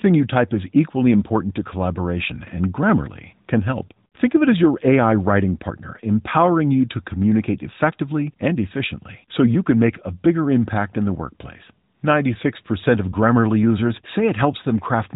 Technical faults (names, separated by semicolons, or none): none